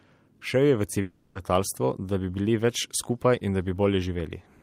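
From 1.01 to 1.37 s, just after "je v", the speech gives way to a buzzy or hissy, fading continuation of the last sound, with no true silence, before resuming at "letalstvo da bi bili" with about 0.34 s lost. This is likely a long network dropout, with the receiver filling the gap.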